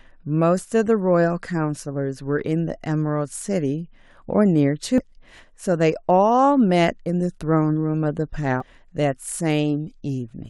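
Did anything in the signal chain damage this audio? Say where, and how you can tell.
Yes. The damage is at the codec stage, from damaged data in a compressed stream. Two brief bursts break through the speech, from 4.98 to 5.00 s and from 8.60 to 8.63 s, each lasting about 22 ms. They sound like short chirps or blips, unlike anything a talker produces. Bad bytes in the encoded file corrupt those frames. The decoder misreads them, loses sync, and has to hunt for the next valid frame header before clean audio resumes.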